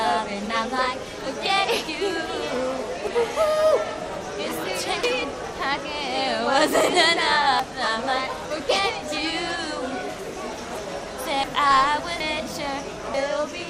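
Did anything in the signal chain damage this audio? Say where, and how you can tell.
Yes. The sound skips ahead with no gap at 3.07, 5.04, 7.60, 8.45, 10.75, 11.44, 12.20 and 13.14 s, losing roughly 0.1 to 0.3 s each time. This is likely a dropped buffer (overrun) at the driver or buffer stage: samples were overwritten before being read, and the surrounding audio was joined directly.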